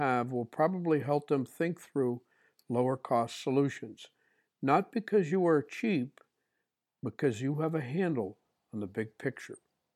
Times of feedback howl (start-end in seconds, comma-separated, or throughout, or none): none